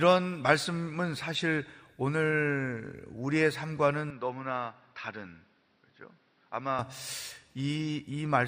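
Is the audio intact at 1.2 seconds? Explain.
Yes, the speech at 1.2 s plays through cleanly with no audible fault.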